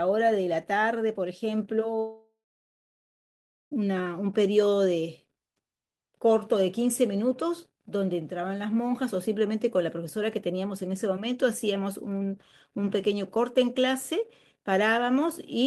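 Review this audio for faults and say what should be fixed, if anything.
From 1.99 s to 3.73 s the speech breaks off: a brief buzzy continuation of the last sound fades, then about 1.35 s of silence, and the speech resumes with 1.72 s missing. This is a long network dropout, likely from a run of lost packets. Unlike a short packet-loss glitch, concealment gives up and the lost audio never returns. A deeper jitter buffer with forward error correction would help prevent it.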